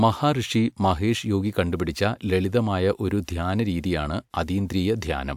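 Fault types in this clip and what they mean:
Nothing wrong turns up here; the speech comes across without any technical faults to point to.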